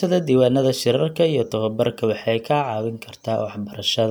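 No technical faults can be heard in this speech recording. Nothing in the sound points to a problem anywhere along the recording or playback chain.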